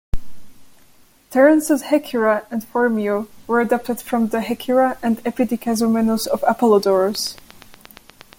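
From 7.15 to 8.34 s a train of clicks runs over the speech: about ten sharp, similar ticks at a regular 8.5 per second, peaking around 5 dB above the speech, likely from equipment interference. Their steady spacing separates them from random crackle.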